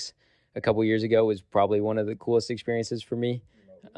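Speech recording, no technical faults detected.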